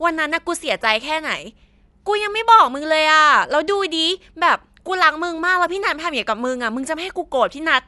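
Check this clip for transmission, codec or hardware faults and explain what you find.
The clip has one fault, and it runs throughout. Dolby Digital compression, for the whole clip: the speech is likely coded with AC-3, at a low rate that fits roughly 64 kbps. The encoder cuts the band so nothing remains above 11.5 kHz, and it gives many frequency lines no precise values, so the decoder fills them with noise. The result is plainly audible: dull, band-limited speech with a rough, fluttering grain around tonal parts.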